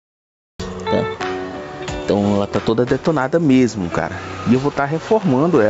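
The audio opens with digital silence until 0.60 s, where sound starts abruptly mid-event. This cut-off start has no attack or fade-in, unlike a gated or faded opening. Throughout, gain pumping swings the level by roughly 15 dB, likely from gain set far too high feeding a fast limiter. That breathing against the loud moments is what separates it from steady over-compression. The call processing also leaves nothing above 8 kHz.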